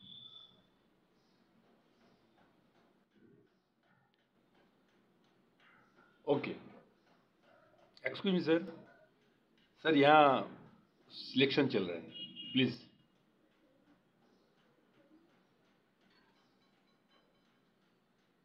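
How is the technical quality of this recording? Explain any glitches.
The recording has three abrupt dips in level. From 3.04 to 4.35 s, 8.21 to 8.68 s and 12.74 to 12.99 s the sound suddenly falls by about 6 dB and then snaps back. The likely cause is that one channel drops out: only one side reaches the mono sum, halving the shared content.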